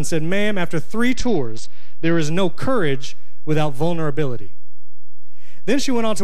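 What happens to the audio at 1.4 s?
At 1.4 s the audio is inside a Bluetooth SBC bit pool drop running from 1.13 to 2.21 s. The sound points to the encoder's bit pool falling from 31 to about 10, roughly 77 kbps. The top sub-bands are starved and the rest coarsely quantised, so the treble goes dull and a gritty noise rises until the rate recovers.

A DC offset is also present there, as it is across the whole clip. The waveform sits shifted from zero by a constant, which cannot be heard directly but eats headroom and appears as steady energy at the very bottom of the spectrum.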